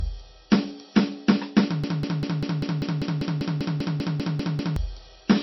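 From start to end the music has a dull, watery quality: nothing sounds above about 5.8 kHz, and the remaining upper detail swirls and chirps metallically, with attacks smeared. This is likely MP3 compression at a bitrate starved enough to fit something near 24 kbps. Short of bits, the encoder cuts the treble at a fixed point and drops weak frequency lines that then flicker from frame to frame. On a spectrogram that shows as a flat ceiling at 5.8 kHz with patchy, blinking blocks beneath it.

From 1.84 s to 4.76 s a broken-record loop takes over. A fragment of about 197 ms repeats exactly, back to back, 15 times, so the music stutters in place for nearly three seconds and whatever should have played then never arrives. The likely cause is a player or stream that stalled and kept resending the last piece it held. The waveform shows the same short shape copied end to end, and the spectrogram shows an identical pattern stamped at regular 0.2 s intervals.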